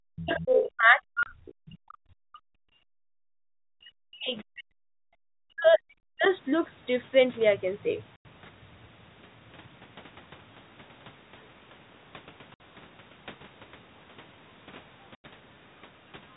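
Speech suppressed in double talk runs from 0.06 to 1.43 s, 1.59 to 3.17 s and 3.63 to 6.24 s. The talker's level sinks by about 40 dB at its deepest, likely because the echo canceller, facing both sides at once, ducked everything.

The other side's voice leaking through appears from 0.18 to 0.62 s at only about 5 dB under the talker, then as faint scraps at 1.47 to 1.53 s (about 30 dB down) and 6.24 to 6.29 s (about 35 dB down). The echo canceller likely left loudspeaker sound in the microphone signal.

Packet loss filled with silence punches hard-edged holes at 1.23 s (30 ms), 6.00 s (30 ms), 8.16 s (90 ms), 12.54 s (60 ms) and 15.15 s (90 ms). Every gap is a multiple of 30 ms, which points to 30 ms packets replaced by silence.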